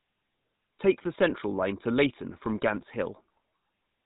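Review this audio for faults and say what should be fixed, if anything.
Throughout the speech there is a buzzy, gravelly roughness on the voice, and the top end is gone, with nothing audible above 4 kHz. This is plainly audible GSM full-rate codec damage, consistent with the 13 kbps full-rate coder. It rebuilds the voice from a vocal-tract model excited by regularly spaced pulses, keeping only every third excitation sample, so the fine harmonic detail turns grainy. To prevent it, capture or deliver the speech over a wideband path rather than GSM full rate.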